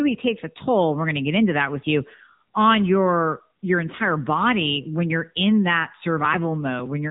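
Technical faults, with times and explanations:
Throughout, AMR narrowband mobile codec: the speech went through AMR-NB mobile coding, which fits a rate near 8 kbps. Sparse pulse excitation of the vocal-tract model leaves a plainly buzzy, synthetic edge, and nothing above 3.8 kHz remains, so the tone sounds muffled and telephone-like.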